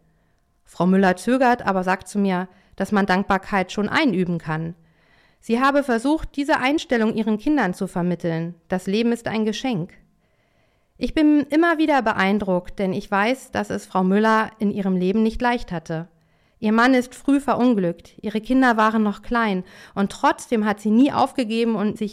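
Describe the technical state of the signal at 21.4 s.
At 21.4 s the signal is intact, with no audible fault at that point.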